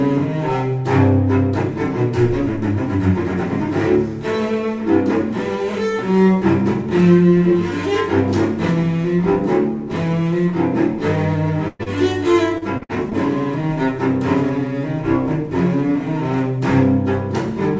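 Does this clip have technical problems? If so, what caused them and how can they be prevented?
Yes. From 11.68 to 11.81 s there is a burst of packet loss. About 120 ms of audio never arrived in time, and the receiver stretched the last sound into a fading continuation for roughly 110 ms before jumping ahead. Unlike a brief concealment, this is long enough to hear as a held, decaying tail followed by a skip. A larger jitter buffer and forward error correction would prevent this.

Right after it, from 11.83 to 11.88 s, comes a short concealed packet loss. About 20 ms went missing and was patched for under 30 ms, so it reads as a quick smear or wobble rather than an audible hold or fade. Redundant packets or FEC would let the receiver recover such small holes.

From 12.58 to 13.13 s there is repeated packet loss, heard as robotic sound. Five separate gaps, the longest 58 ms, leave about a quarter of that half-second concealed. 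The repetition makes it choppy, which distinguishes it from a single burst. A steadier network path, with less congestion or a wired connection, would prevent the loss itself.

All of this sits on a G.722 call path, which removes everything above 8 kHz.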